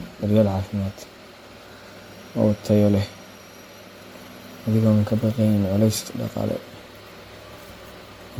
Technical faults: generation loss

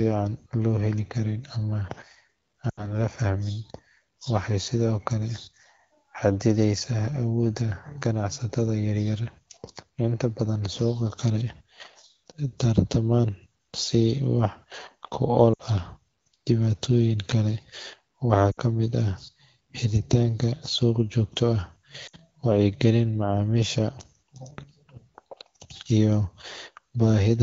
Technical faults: lost AMR speech frames

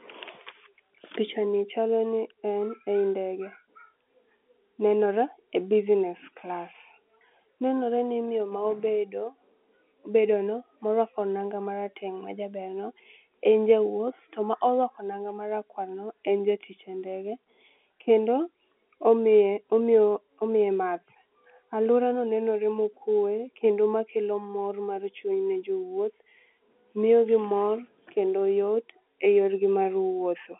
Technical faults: none

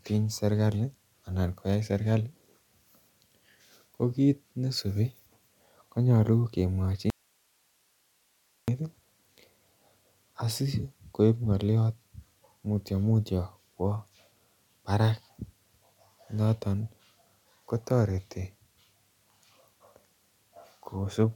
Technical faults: audio dropout to a faint residue

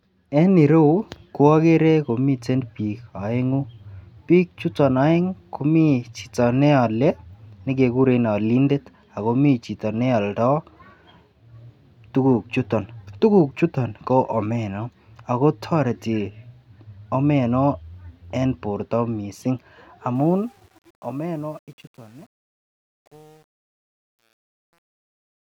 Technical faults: truncation distortion on a fade

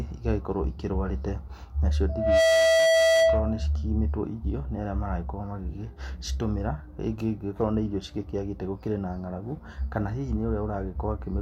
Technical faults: loudspeaker feedback squeal

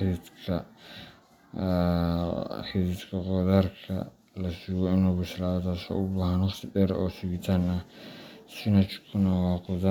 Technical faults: none

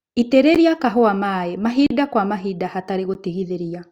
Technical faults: block of digital silence

